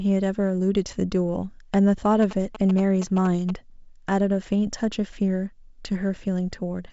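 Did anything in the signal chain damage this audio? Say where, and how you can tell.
Yes. From 2.22 to 3.51 s the speech carries a galloping dit-dit-dit of short buzzes at about 217 Hz, roughly 10 dB under the speech. These are GSM signalling bursts: a nearby 2G phone's radio pulses, rectified in the analogue wiring or input stage.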